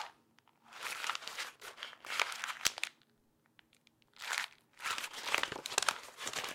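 Nothing stood out as a technical fault on listening to these everyday sounds.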